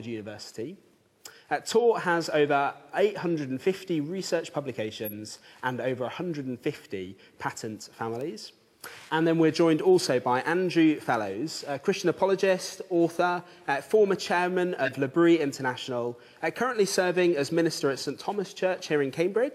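At 5.05 s a corrupt frame is decoded. The burst runs to 5.12 s, so it covers about one compressed frame. Bits in that frame were flipped, yet the decoder played it. Misread gains and codes put energy at the wrong frequencies. It sounds like a short, squeaky blip, peaking around -20 dBFS.

At 8.21 s there is a bit error spike. A bit flipped in the stored or transmitted samples. The value jumped by a power of two and snapped back. It is a single sharp tick, broadband and unrelated to the sound. Its shortness fits about two bad samples.

At 13.93 s another bit error spike appears. This one fits a single corrupted sample. It gives the same isolated, hard click.

At 14.85 s a second corrupt frame is decoded, lasting until 14.93 s. Again, about one damaged frame was played as if valid. This burst is louder, around -10 dBFS. It comes through as a harsher chirp of misplaced noise.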